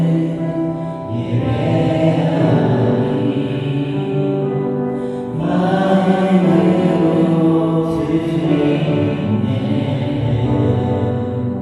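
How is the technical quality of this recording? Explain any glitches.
The recording carries one persistent fault: a doubled audio track running for its entire length. A second, full-band copy of the sound trails the original by around 0.4 s, roughly 5 dB quieter, with no decay or room colouring. The likely cause is the same signal arriving again through a slower capture path and being mixed back in.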